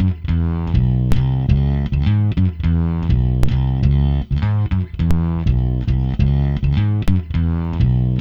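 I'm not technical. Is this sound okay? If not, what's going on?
No. Four times the recording's baseline, the silent centre line the sound swings around, suddenly shifts to a new level and then drifts back. This is called a DC step. Each jump comes out as a short, low thump or click, at 1.12, 3.43, 5.11 and 7.08 seconds, with the later two slightly softer. The sound itself carries on unchanged underneath, and each shift fades away within a fraction of a second.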